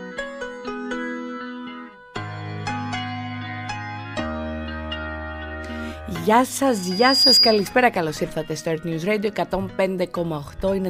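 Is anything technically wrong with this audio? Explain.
Yes. From 6.70 to 7.76 s there is loudspeaker feedback squeal. A microphone re-amplifies its own loudspeaker until a 4.9 kHz tone runs away, swelling over about half a second to roughly 10 dB above the audio. That gradual swell separates it from a steady interfering tone.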